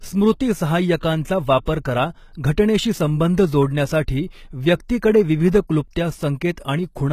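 Throughout the speech, plainly audible codec damage points to HE-AAC compression as the likely cause, at a rate that fits roughly 20 kbps. The treble is rebuilt from copied lower bands rather than coded, so its harmonics don't line up with those below, and nothing remains above 14.9 kHz.

Pre-echo appears at 0.98 s, spreading over 46 ms, then at 1.65 s and 2.33 s, each about 20 ms. The codec spread quantisation noise across each block, so a brief hiss precedes the sharp onset, which sounds softened and smeared.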